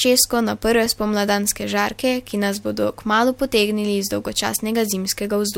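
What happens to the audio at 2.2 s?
At 2.2 s the speech runs on cleanly, with no dropout, click, distortion or other fault to be heard at that point.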